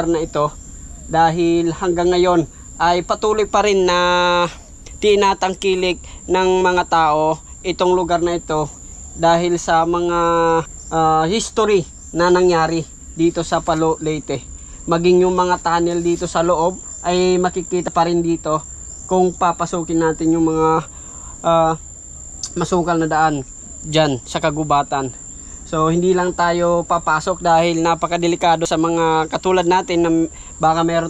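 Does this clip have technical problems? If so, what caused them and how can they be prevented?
Yes. At 4.88, 17.88, 28.65 and 30.37 s the sound skips ahead, losing roughly a tenth of a second at first and about half that later. This is likely a dropped buffer (overrun): unread samples were overwritten. Larger buffers and a higher-priority capture thread prevent it.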